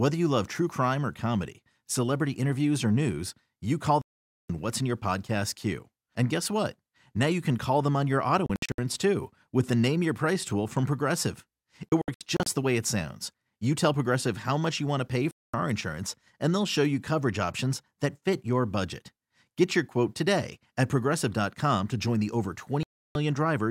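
Speech that cuts to silence five times: about half a second at 4.02 to 4.50 s, a broken run of short holes from 8.46 to 8.79 s and again from 11.89 to 12.47 s, then clean gaps at 15.31 to 15.54 s and 22.83 to 23.16 s. Each is a digital broadcast dropout, where the receiver muted on corrupted or missing frames and resumed when valid ones arrived, so whatever was transmitted in those gaps is simply gone.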